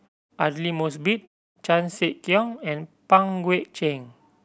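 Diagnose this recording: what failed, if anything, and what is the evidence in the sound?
Nothing in the signal chain has failed: the speech arrives intact with no dropouts, distortion or timing errors, and the output falls to silence in the pauses before coming back in time for each next phrase, so no speech is lost.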